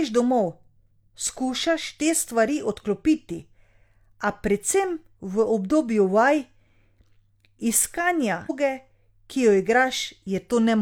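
A speech recording with a stream segment skipped at 8.46 to 8.51 s. The sound jumps abruptly forward there with a small blip, and a stretch of the programme never arrives. The likely cause is a segment of the stream failing to load, with the player moving straight on to the next one. Unlike a dropout, which leaves a silent gap and then resumes where it stopped, this skip leaves no hole; the continuity breaks because material is missing.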